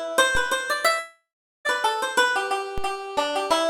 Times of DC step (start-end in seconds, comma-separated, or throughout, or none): 0.35-2.78